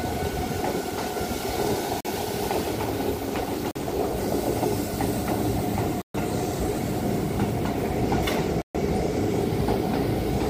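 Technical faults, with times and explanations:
2.01 s, 3.71 s, 6.02 s and 8.62 s, block of digital silence: the output drops to silence and back with no fade. The first two holes last about 43 ms, which fits a 2048-sample buffer left unfilled. The last two last 128 ms. A waveform shows flat silent gaps with sharp edges, and a spectrogram shows blank columns bounded by vertical broadband lines.
2.79–4.26 s, call bitrate drop: a falling bandwidth estimate makes the encoder code far more coarsely, with the lowest quality lasting about 1.4 s. This points to a fall from around 96 kbps to around 22 kbps. The sound turns rough, watery or muffled. A spectrogram shows the upper frequencies sharply cut off, with smeared, blocky texture until the bitrate recovers.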